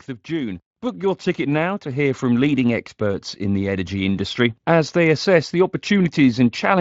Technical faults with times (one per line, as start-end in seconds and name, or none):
0.26-2.28 automatic gain rising
5.25 dropped samples